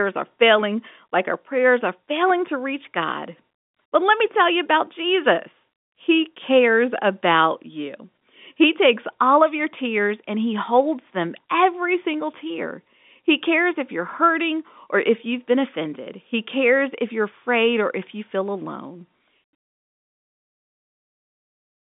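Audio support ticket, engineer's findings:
Nothing stood out on listening to this speech clip; no faults found.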